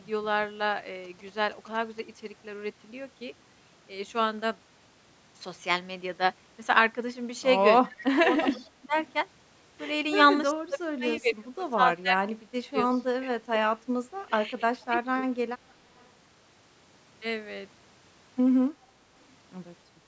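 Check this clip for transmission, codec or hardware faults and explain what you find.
Three faults affect this speech recording: GSM interference early on, and then repeated double-talk suppression and echo leakage from an echo canceller that isn't keeping up.

GSM signalling bursts, 1.04 to 2.00 s: A nearby 2G phone was exchanging short signalling bursts with its network rather than carrying a call. The audio circuitry rectified that radio energy and turned it into sound. The result is a galloping dit-dit-dit of brief buzzes repeating at 217 Hz, sitting well below the speech level.

Speech suppressed in double talk, 7.87 to 8.94 s, 10.53 to 12.75 s and 13.19 to 15.24 s: This is likely an echo canceller that couldn't separate the near talker from loudspeaker echo while both sides spoke at once, so it pulled the whole signal down. The speech dips sharply, losing something like 20 to 25 dB at its deepest.

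Echo leak, 8.46 to 8.70 s, 9.06 to 9.13 s, 12.90 to 13.05 s and 15.69 to 16.07 s: Loudspeaker sound the canceller failed to remove was sent back down the line, likely because it let residual echo through. A copy of the speech returns 310 ms late, in short scraps. The copy near 8.5 s is almost as loud as the speech, the one near 13 s is clearly quieter, and the others are faint. Above all of this, the call's microphone processing leaves no content over 8 kHz.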